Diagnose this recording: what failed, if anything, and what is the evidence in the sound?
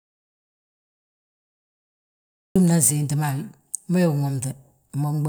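The first 2.56 s of this speech recording are an audio dropout to silence. The clip opens already inside the gap: silence with no room tone, noise floor or hum, and then speech cuts in abruptly at 2.56 s. That total absence of background points upstream of the recorder, most likely a lost input at the capture stage, such as a disconnected device, failed link or mute, while the recorder kept writing silence.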